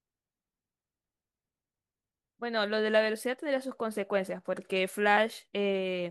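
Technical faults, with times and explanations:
Nothing technical stands out in this speech clip; there's no fault to point to anywhere in it.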